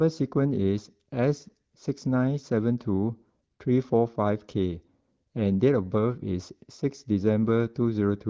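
The speech comes through without a technical fault, carried by the AMR wideband (HD Voice) codec with only light coding traces and a band that stops near 7 kHz, consistent with one of its upper bitrates around 16 kbit/s.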